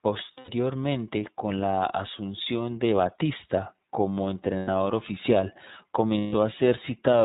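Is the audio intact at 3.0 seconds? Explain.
No. At 3.0 s, as across the whole clip, the speech runs through the iLBC codec, and the damage is plainly audible. iLBC is a narrowband VoIP codec, so everything above 4 kHz is gone, leaving a muffled, telephone-like band. It codes each frame's excitation on its own without leaning on the previous one, which gives the voice a slightly rough, synthetic edge. The result fits the 13.33 kbps mode with 30 ms frames.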